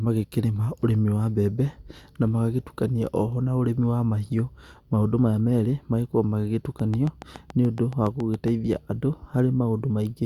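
Speech runs through the clip, and from 6.80 s to 8.49 s a train of clicks sits on top of it. About fifteen near-identical pulses arrive at a regular 7.1 per second, peaking a few decibels above the speech and ticking on through the pauses as well. That steady spacing and matching shape set it apart from random crackle or a single isolated click. The likely cause is interference from nearby equipment or a faulty connection or power supply.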